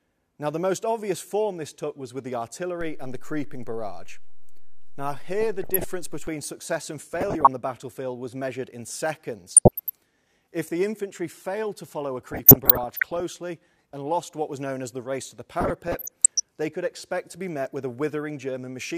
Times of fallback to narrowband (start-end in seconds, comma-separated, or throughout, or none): none